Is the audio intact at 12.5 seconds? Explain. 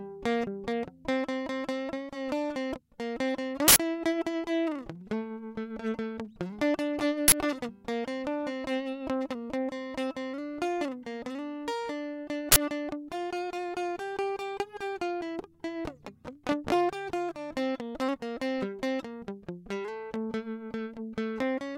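No. Right around 12.52 s the music gets interrupted by an uninitialised buffer, lasting about 40 ms until 12.56 s. What's happening is that a block of playback memory went out before any audio had been written into it, so whatever junk was sitting there got played as if it were samples. You hear it as a short, loud crack of digital noise cutting across the music.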